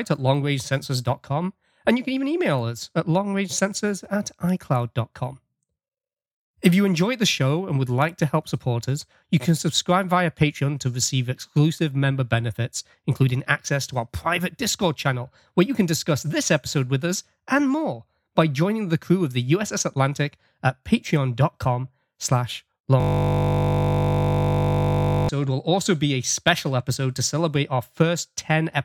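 From 23.00 s to 25.29 s the speech stops and a system hang loop takes over: the machine or its audio driver stalled while the sound hardware kept replaying the same 20 ms stretch of its ring buffer, more than a hundred times in a row. Because the loop is so short, it repeats at 50 Hz and comes across as a steady, flat buzz rather than a stutter. Normal playback resumes with "will also be a".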